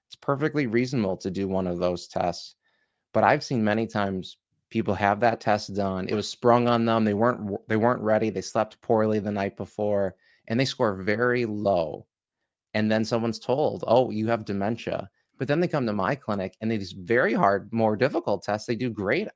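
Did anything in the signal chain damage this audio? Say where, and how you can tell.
No, nothing in the chain audibly damaged this speech; I can't hear any fault at any stage between capture and playback.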